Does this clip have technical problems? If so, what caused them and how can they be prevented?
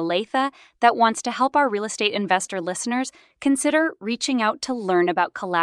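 Yes. A corrupt frame was decoded: damaged bits in a few compressed frames were played anyway, putting misplaced energy into a chirp, blip or burst of noise peaking near -15 dBFS from 2.42 to 2.47 s, between "help our real estate" and "listeners consider reaching out". Error checking that conceals or drops frames failing integrity checks would prevent it.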